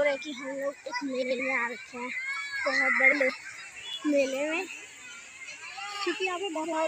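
Frames out of order occur at 1.22 to 1.40 s, 3.12 to 3.30 s and 6.55 to 6.73 s. In each case two neighbouring runs of about 85 ms, consistent with four frames apiece, were decoded in swapped order. Each stretch plays with its halves exchanged, giving a brief garbled flutter, and no time is lost.

At 3.93 s there is a block of digital silence. A run of roughly 4.4 ms was output as zeros, probably because the buffer was not filled in time. The audio drops straight to nothing and returns without a fade, which is heard as a tick or dip rather than as silence.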